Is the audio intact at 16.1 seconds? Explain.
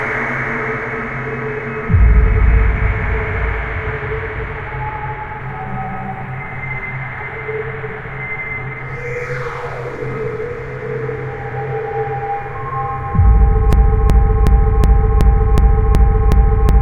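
No. At 16.1 s the audio is caught in a broken-record loop that starts at 13.73 s and runs to the end at 16.82 s. A fragment of about 0.37 s repeats exactly, back to back, eight times. It sounds like a stuck, stuttering cycle. The likely cause is a stalled player, encoder or stream that kept resending the last fragment it held. Whatever should have played during those final seconds is lost.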